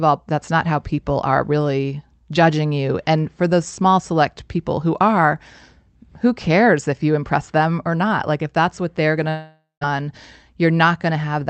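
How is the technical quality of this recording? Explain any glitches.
The recording has one clear glitch, a long network dropout, heard over the Opus call path with its band limit near 8 kHz. From 9.29 to 9.83 s, just after "that's what they're going", the audio stops arriving. The last sound is stretched into a fading buzz for about half a second, then about 0.15 s of near-silence follows. Speech resumes with roughly half a second missing. Lost packets are the likely cause.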